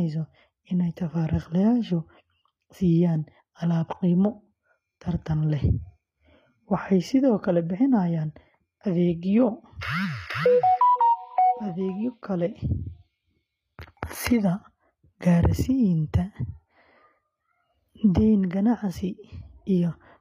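Throughout the speech, the treble sounds synthetic: s sounds come out gritty and lispy, with a metallic sheen, and nothing is present above 14.9 kHz. This is HE-AAC compression, likely at a bitrate around 24 kbps. The codec keeps only the lower spectrum and regenerates the top by copying lower bands upward under a coarse envelope, so the rebuilt harmonics fail to line up with the real ones.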